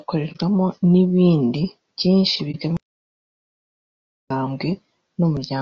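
Throughout, the speech sounds rough and grainy, with noise filling the gaps between harmonics and a thin, artificial-sounding top band. The likely cause is low-delay AAC compression (AAC-ELD), whose short frames resolve pitch poorly; the damage points to a bitrate around 32 kbps.

At 0.32 to 0.38 s, just before "n’ibindi byinshi", and again at 2.51 to 2.56 s, just after it, the sound fades softly into a brief hole and back. This is AAC frame loss with muting: each gap fits a single lost frame of about 30 ms whose spectrum the decoder zeroed, while the overlapping windows smoothed the edges.

From 2.77 to 4.30 s, after "n’ibindi byinshi", the audio cuts abruptly to total silence for about 1.5 s, with no room tone at all. This audio dropout to silence is likely the input being lost while the recorder kept writing silence, so whatever came in that stretch is gone.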